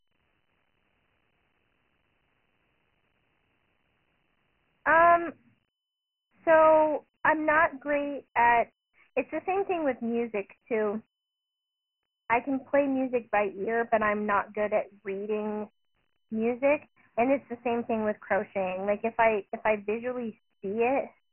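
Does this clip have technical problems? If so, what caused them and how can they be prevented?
Yes. The whole clip carries Dialogic VOX ADPCM damage, and it is heavy. Nothing reaches above 3 kHz, which fits 4-bit OKI ADPCM at 6,000 samples a second, about 24 kbps. Each sample stores only a coarse step, so gritty hiss rides on the speech. To prevent it, record and keep a linear PCM master at a higher sample rate, and convert to VOX only for the phone system.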